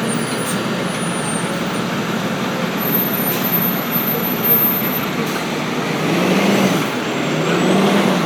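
No technical faults can be heard anywhere in this recording of sounds. Nothing in it calls for a timestamp or a closer listen.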